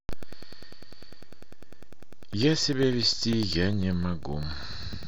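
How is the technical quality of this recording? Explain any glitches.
The recording has a clear technical fault. Periodic USB or driver dropouts run from 0.13 to 5.03 s: every 0.1 s, a blocked bus or driver cuts roughly a millisecond of speech to silence, producing steady ticks through the speech.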